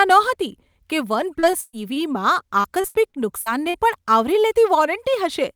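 Repeated packet loss from 1.39 to 2.03 s, just after "નહોતી કે વન", and again from 2.61 to 3.77 s: lost packets are patched by extending the preceding sound, so the speech turns choppy and robotic, with pieces missing.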